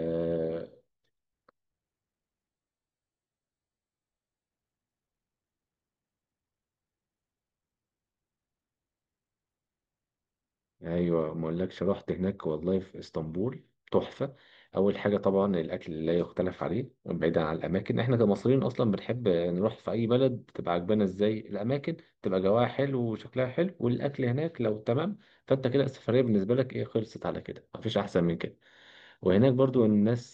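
From 2.5 s to 4.5 s the speech switches abruptly to a much coarser encoding and then snaps back, with no gap at either boundary. This is an adaptive stream at a lower bitrate: the player briefly fetched a reduced-quality rendition, most likely because throughput fell. In that stretch there are audible codec artefacts, which fits a step down from about 96 kbit/s to about 12 kbit/s AAC.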